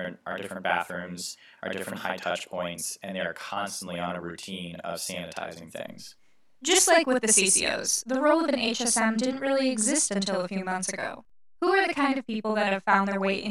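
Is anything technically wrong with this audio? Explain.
Yes. Throughout the clip there is a channel delay causing doubling: one channel runs about 46 ms late, which fits a 2048-sample buffer, and both are summed to mono. The late copy arrives at equal level, so every syllable of the speech is heard twice, like a slapback echo.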